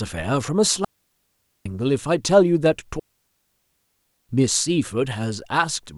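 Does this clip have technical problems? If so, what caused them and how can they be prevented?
Yes. The speech has two digital wireless dropouts, from 0.85 to 1.66 s (about 0.81 s) and from 2.99 to 4.29 s (1.3 s). Each time, the receiver lost too much of the digital stream and muted itself with a very quick fade, leaving a clean hole with no crackle or noise burst around it. The waveform flattens to a near-silent line at those points, and the spectrogram shows blank vertical bands. Keeping the transmitter in clear line of sight and within range, on a clean channel, prevents such dropouts.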